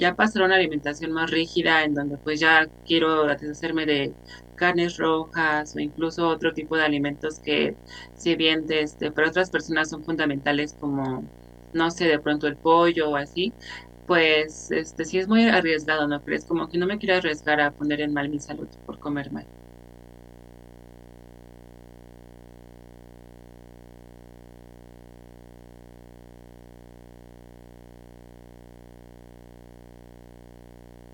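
From the first second to the very end, there's a video or display buzz sitting under the speech. A screen or its video cable is leaking into the audio path, so you get a steady buzz locked to the picture's 60 Hz field rate, with a gritty hash riding on top of it. It's not loud, something like 25 dB below the talking, but it never lets up.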